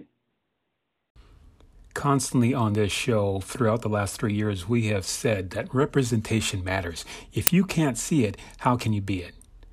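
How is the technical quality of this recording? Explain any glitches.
The recording has one clear glitch. An uninitialised buffer at 7.47 s: a block of audio was played before any sound had been written into it, so leftover memory came out as samples. The result is a loud crack lasting about 5.8 ms, which fits a 256-sample buffer.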